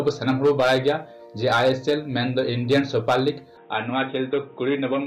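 At 3.57 s the sound abruptly turns duller and boxier through to the end, losing everything above 3.8 kHz and dropping about 5 dB, with no gap. A new background noise about 35 dB down marks a likely input switch to a poorer device rather than a mere filter.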